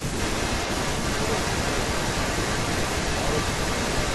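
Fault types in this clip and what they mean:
Speech suppressed in double talk: the opening 0.13 s dips by about 15 dB, likely an echo canceller attenuating the near talker while both sides spoke at once.
Echo leak: from 0.18 s to the end, a delayed copy trails the speech by 326 ms at roughly equal level, likely uncancelled loudspeaker pickup returned to the far end.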